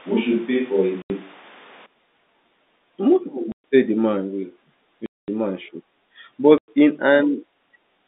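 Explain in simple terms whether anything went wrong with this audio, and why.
Switch to a distant microphone, from the start to 1.86 s: the speech sounds roomy and hollow, with noticeable background noise, likely because a far-off microphone replaced the close one.

Packet loss filled with silence at 1.02 s (80 ms), 3.52 s (120 ms, just before "say the man"), 5.06 s (220 ms, just before "man should") and 6.58 s (100 ms): lost chunks of audio were replaced by sudden silent gaps with hard edges. The gap lengths fit 20 ms packets.

The narrow telephone-band sound comes from the G.711 telephone coding.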